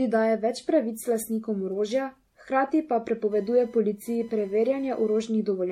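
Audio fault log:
throughout: generation loss. The speech sounds swirly, smeared and hollow, with a metallic, watery texture beyond what one lossy pass would leave. Consonant attacks are blurred and soft. Nothing is present above 16.5 kHz. The likely cause is repeated MP3 re-encoding, pointing to around seven passes at about 64 kbit/s. Each decode and re-encode quantises again on a shifted frame grid. Noise and spectral holes pile up, and transients smear further each time.
3.32–5.32 s: computer activity noise. A chirping, buzzy whine appears under the speech for about two seconds, then stops. It pulses at roughly 1 kHz and sits about 35 dB below the speech. It starts and stops independently of the speech. This happens when processor, graphics or mouse load changes disturb the ground shared with the audio circuit. The interference follows the computer's activity, not the sound.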